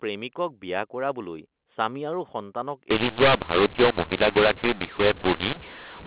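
From 2.91 s to the end, mu-law and A-law are mixed up: A-law telephone samples are decoded as mu-law, scrambling levels into harsh distortion with hiss filling the pauses. Unlike clipping, quiet moments get noisier too, not only the loud peaks.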